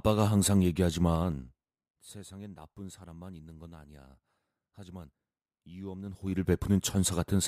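From 1.12 to 1.86 s, zipper noise ticks through the speech as the level drops by roughly 20 dB. The gain moves in unsmoothed 2 dB jumps, around ten a second. Each jump clicks. From 6.04 to 6.50 s it returns, rising faster.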